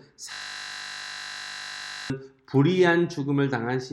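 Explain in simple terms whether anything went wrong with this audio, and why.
From 0.32 to 2.10 s there's a system hang loop. The computer froze and replayed one 20 ms scrap over and over, making a steady 50 Hz buzz.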